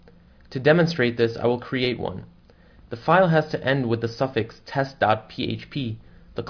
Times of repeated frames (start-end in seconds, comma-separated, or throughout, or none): none